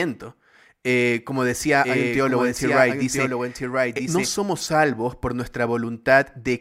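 A second, slower capture path, likely holding the speech out of step, mixes it in twice from 1.84 s to 4.28 s, after "como decía" and before "salvos por". This doubled audio track trails by about a second, about 5 dB quieter, dry and full-band, starting and stopping abruptly.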